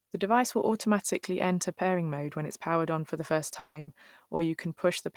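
A speech clip with three network losses near its end. A long network dropout is the likely cause of the gap from 3.59 to 3.78 s, where about 160 ms of audio is lost and replaced by a continued, fading buzz or hiss before the speech resumes further on. Right after, a burst of packet loss from 3.79 to 3.90 s drops 80 ms, which the receiver covers with a held, decaying extension of the last sound. Finally, short concealed packet loss at 4.35 to 4.42 s costs 40 ms, heard as a brief smear where the receiver patched the hole.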